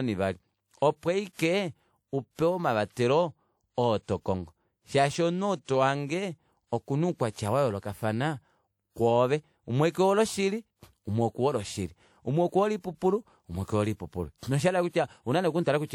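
A transform codec spread its quantisation noise across a whole block, so noise sized for a sharp attack leaked into the quiet before it: pre-echo from 2.92 to 2.97 s, just after "opo aike upewa", a 48 ms hiss that leaves the attack softened and smeared.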